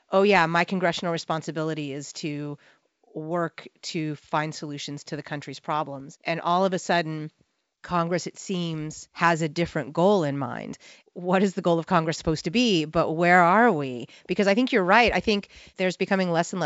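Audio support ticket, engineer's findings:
No faults found: speech carried over G.722 wideband telephone coding, consistent with the 64 kbit/s mode, with content ending near 7.7 kHz as expected for that path and coding damage faint at most.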